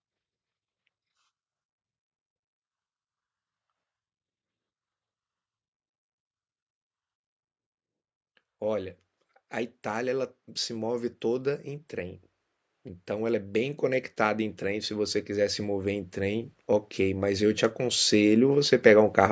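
From 13.06 s to 19.27 s the level climbs steadily, an automatic gain rising fault: the gain control judged the input too quiet and kept pushing its gain up, about 12 dB in total over those six seconds. The speech and the background noise swell together, so the room seems to creep closer. On a waveform the envelope widens gradually toward the end; on a spectrogram every band brightens at once, still with nothing above 8 kHz from the call's microphone processing.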